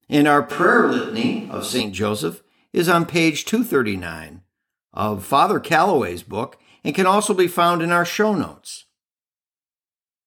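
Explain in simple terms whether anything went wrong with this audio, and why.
From 0.52 to 1.80 s the speech suddenly sounds hollow, roomy and thin, at about the same loudness, then snaps back. That's likely a switch to a distant microphone.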